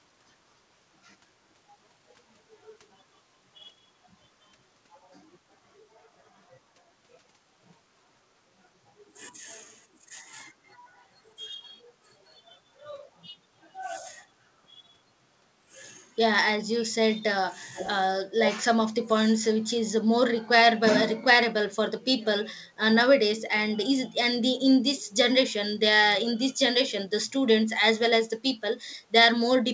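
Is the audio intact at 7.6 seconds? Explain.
Yes, the speech at 7.6 seconds is intact, carried through the call path with its normal wideband sound and nothing above 8 kHz, as a G.722-style call codec would leave it.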